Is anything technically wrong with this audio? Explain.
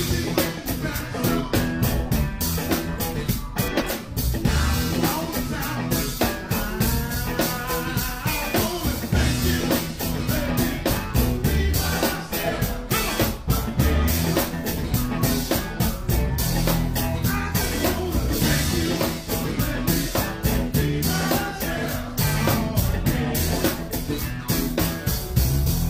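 Yes. At 3.70 to 3.91 s there are frames out of order: two adjacent blocks of roughly 93 ms, each pointing to a pair of codec frames, arrived swapped and were decoded in that order. The stretch plays halves reversed, a garbled flutter, and nothing goes missing.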